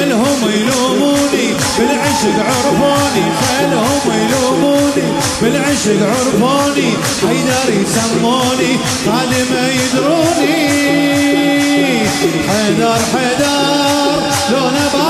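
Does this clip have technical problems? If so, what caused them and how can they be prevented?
Yes. Timecode bleed runs through the whole clip: a steady chirping warble sits behind the sound, roughly 20 dB below it. Linear timecode is a square wave that alternates between two pitches, here around 1 kHz and 2 kHz, and it repeats at 29.97 frames per second, which gives the warble its even, rapid rhythm. It got into this audio path because a neighbouring timecode track or cable leaked into it. To prevent it, route timecode on separate shielded cable away from audio lines, and leave a guard track between timecode and audio on multitrack media.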